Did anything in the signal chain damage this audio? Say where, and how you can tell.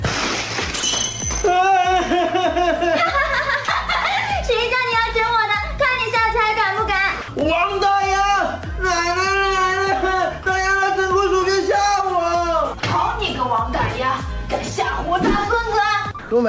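Yes. At the call-processing stage, the sound briefly gives way to a flat, steady hiss at 0.80–0.83, 3.65–3.68, 7.22–7.28, 10.43–10.46, 12.80–12.83 and 16.19–16.31 s, mostly 30 ms gaps with longer ones of 60 and 120 ms. This is sound dropped by the voice detector. The sender most likely judged those moments to be background, stopped transmitting, and the receiver substituted comfort noise. Packet-loss concealment would stretch or repeat the preceding waveform, whereas these gaps hold only featureless noise. The G.722 path carries everything else, with nothing above 8 kHz.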